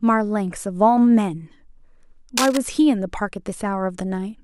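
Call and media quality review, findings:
Cable scratch noise, 2.37 to 2.57 s, over the speech: dense, uneven scratching burst, fairly loud, just under the speech level. Likely a worn cable or connector moved, contact resistance fluctuating. A ragged cluster lasting about 0.2 s, unlike a single click or a clean dropout.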